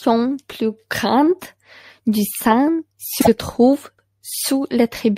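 At 3.20 s a short run of compressed data was delivered twice, a case of repeated frames. The decoder therefore plays the same 52.2 ms block again, which fits a pair of compressed frames, and ends at 3.28 s. That extra play adds 52.2 ms to the speech and is heard as a brief stutter: a tiny slice of sound jumps back and repeats.

From 3.99 s to 4.09 s the audio shows overlapping chunks. It was handled in 2.0 s pieces, and the next piece began before the previous one had finished. At that join a 100 ms stretch plays twice in a row, so the speech lurches back by a tenth of a second and repeats itself. That is heard as a stumble at the seam.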